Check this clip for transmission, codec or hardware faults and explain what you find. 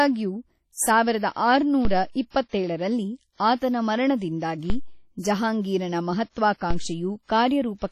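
Two faults are present in this speech clip: coding damage throughout, and three DC steps.

Throughout, the sound is heavily smeared, with ringing and a washy hiss that rises and falls with the speech. Nothing remains above 13.8 kHz. This points to WMA compression, likely at a low bitrate near 32 kbps. Long transform blocks spread quantisation noise over tens of milliseconds, and weak components drop out.

At 1.85 s, 4.7 s and 6.71 s there are DC steps. The waveform's zero line jumps suddenly, and each jump is heard as a low thump or click. The offset then decays away slowly, as through a high-pass near 2 Hz. The speech itself continues unchanged.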